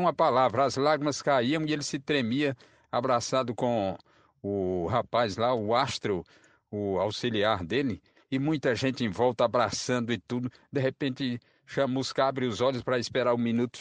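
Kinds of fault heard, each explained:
No technical faults can be heard in this speech clip. Nothing in the recording calls for a fault explanation.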